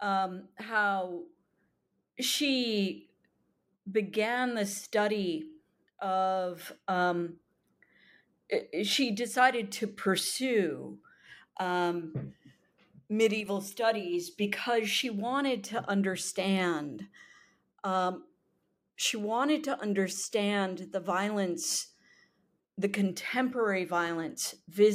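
At 13.41 s the speech briefly sinks in level, dropping by about 6 dB for roughly 50 ms until 13.46 s, just before "studies because she wanted", and then snaps back to full strength. The dip is abrupt rather than faded. The likely cause is one channel dropping out of a stereo source: with one side missing, the mono sum loses half of the shared signal for that instant.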